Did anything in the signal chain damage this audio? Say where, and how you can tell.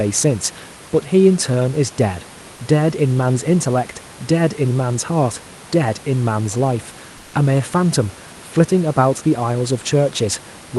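Yes, in the call processing stage. From 7.17 to 7.33 s, a 160 ms gap in the speech loses its real background, about 26 dB below the loud parts, and gets a flat, featureless hiss about 2 dB quieter instead. That's comfort noise in place of the background, likely from Opus DTX: the sender's voice detector stopped transmitting, and the receiver filled the hole with synthetic noise. The audio also tops out around 12 kHz, which fits the Opus call path it went through.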